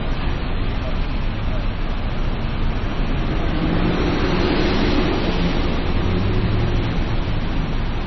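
Throughout, nothing is heard above about 5.9 kHz, and the sound turns watery and swirly. This is likely heavy MP3 compression, fitting a very low bitrate near 24 kbps.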